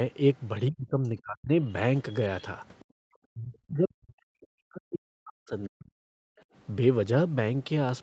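A speech recording over a call path, with nothing above 8 kHz, shows four faults. Twice, speech suppressed in double talk was likely triggered when the echo canceller, facing both sides at once, turned everything down. The talker dips by as much as about 40 dB from 0.7 to 1.5 s and again across a long stretch from 3.32 to 6.29 s. The other side's voice leaking through from 2.09 to 2.45 s was likely residual loudspeaker echo the canceller failed to remove, and it is heard as a faint second voice roughly 30 dB under the talker. Finally, background gated by the echo canceller occurs when the canceller clamps the microphone during loudspeaker playback, dropping the room sound by about 40 dB from 2.84 to 3.04 s before it recovers.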